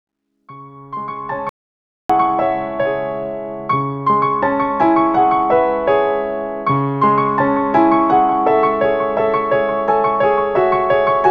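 At 1.49 s the sound cuts out dead and stays gone until 2.10 s: an audio dropout to silence lasting about 0.6 s. It's plain silence with no room tone, likely because the input briefly disconnected or muted while recording continued, so whatever happened there is lost.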